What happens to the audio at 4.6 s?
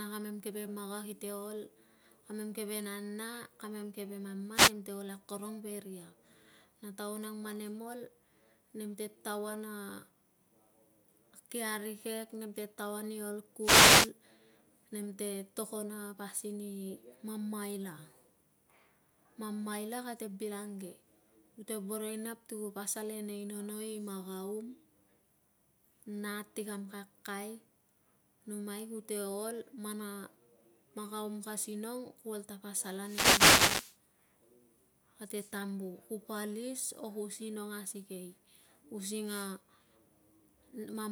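The radio link from an analogue FM microphone fades as reflected signals cancel, and receiver noise rises through the gap: a wireless microphone noise hit from 4.53 to 4.73 s, between "keve nana kamem keve" and "te ol akorong", heard as a brief swish of static.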